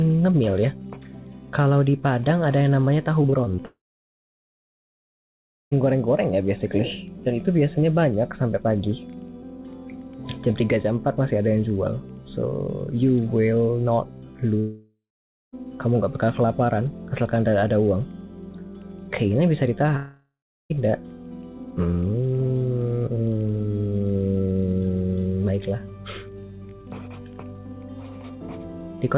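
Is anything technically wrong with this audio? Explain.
Yes. There are two network faults on top of a narrowband call path that passes nothing above 4 kHz.

The first is repeated packet loss, heard as a robotic sound. It runs from 3.22 to 3.60 s. Four short gaps fall in that stretch, the longest about 21 ms. Each gap is patched by stretching the last bit of audio. About a fifth of the stretch is filled this way. The sound turns choppy.

The second is a long network dropout, which happens three times. It runs from 3.66 to 5.73 s, from 14.59 to 15.54 s, and from 19.96 to 20.76 s. Each time, the audio holds as a fading buzz or hiss and then goes silent. The silent part lasts about 1.9 s, 0.49 s and 0.34 s. The audio then resumes with that section gone. This is likely a stretch where no packets arrived at all.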